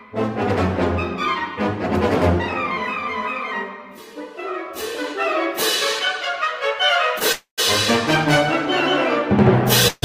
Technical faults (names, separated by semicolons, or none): call audio freeze